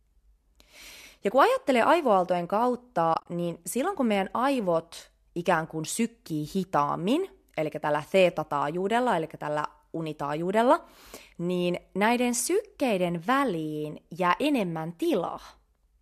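From 3.14 to 3.26 s, just before "niin silloin kun meidän", AAC frame loss with muting leaves several short gaps across about 120 ms of speech, about 80 ms silent in total, none longer than a few tens of milliseconds. The speech fades out and back in. A waveform shows soft-tapered dips to silence, and a spectrogram shows narrow full-band blank columns.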